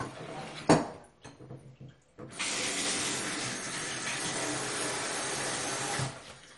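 MP2 compression runs throughout the clip. The likely cause is MPEG Layer II coding at a starved bitrate, around 48 kbps. Upper sub-bands are switched off, leaving nothing above 11.3 kHz, and the remaining bands flicker and are coarsely quantised. The sound is dull, with a gurgling, granular distortion.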